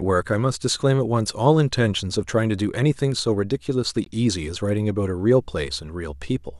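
At 4.04 s the speech drops out for about 18 ms, a brief hole whose edges the codec smears before the sound resumes exactly where it left off. This is a gap at a join of encoded pieces. The audio appears to have been encoded in sections about 6 s long and spliced without trimming, so the encoder's start-up delay and the padding of the previous section's last frame both remain at the seam as silence.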